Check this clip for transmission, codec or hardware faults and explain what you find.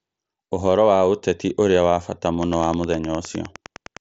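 There's one fault here, Wi-Fi interference, on a speech clip whose top end stops near 7.7 kHz as you'd expect from an mSBC headset link. From 2.36 s to the end at 4.01 s there's a steady ticking about ten times a second, sitting roughly 25 dB under the speech. A nearby Wi-Fi radio's beacon, every 102.4 ms, is being picked up and rectified by the audio circuit, so each beacon lands as a small click.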